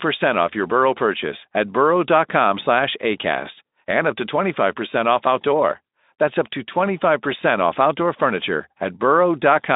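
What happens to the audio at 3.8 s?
Nothing goes wrong at 3.8 s: the speech there carries on intact, with no dropout, glitch or other fault at that point.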